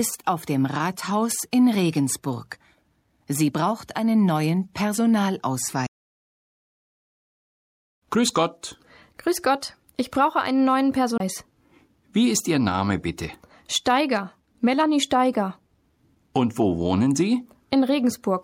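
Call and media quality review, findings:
CD skip at 5.86 s and 11.18 to 11.20 s. Tick, brief mute, then playback resumes elsewhere on the disc. Laser tracking jumped to another turn of the spiral.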